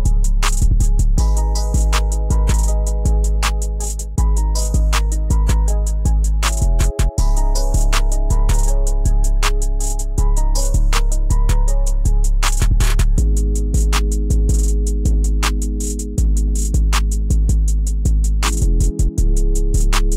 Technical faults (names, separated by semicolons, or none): none